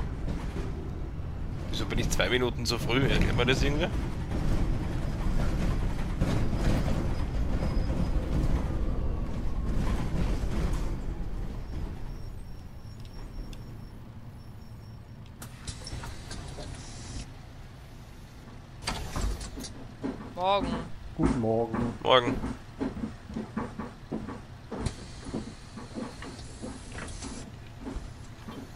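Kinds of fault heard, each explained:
No fault can be heard anywhere in this audio. Nothing stands out as a technical problem that would need to be named or explained.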